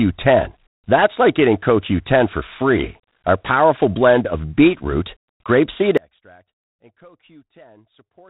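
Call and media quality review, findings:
Audio dropout to a faint residue, 5.98 s to end: speech cuts abruptly, leaving only a faint trace some 35 dB down, no fade. Likely upstream capture or transport loss while the downstream path stayed live.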